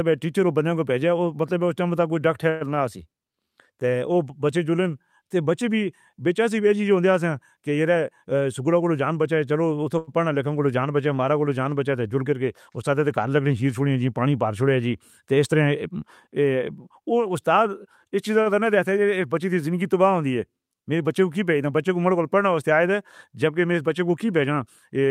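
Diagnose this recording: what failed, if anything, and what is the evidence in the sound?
The speech stops moving forward from 2.49 to 2.76 s. The last sound is held as a fading buzz or hiss for about 113 ms, then the speech picks up where it left off with nothing missing, so the later audio arrives later than before. This is a call audio freeze at the network and jitter-buffer stage. The likely cause is delayed packets that let the buffer run dry, with the receiver filling the wait by extending the last sound.

A jitter buffer speed-up occurs twice, from 7.95 to 9.21 s and from 16.90 to 18.05 s. In both stretches the speech runs about 8% fast at unchanged pitch and sounds hurried. This points to the receiver's playout stage. The buffer had built up more audio than its target, so the receiver trimmed short pitch-period-length pieces many times in a row, removing roughly a tenth of a second in each stretch to pull the delay back down.

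Two short stalls from a late packet appear at 9.98 s and 18.42 s. At each one a sound is held too long, by 93 ms and then 41 ms, with a slight buzz or dip before the speech continues from the same point. Nothing is lost. The stage is again the network and jitter buffer: a packet was not there at its playout time, the buffer emptied briefly, and the receiver stretched the preceding sound until the packet arrived.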